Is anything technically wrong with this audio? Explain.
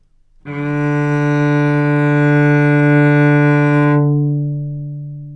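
No, nothing technically wrong turns up anywhere in this audio.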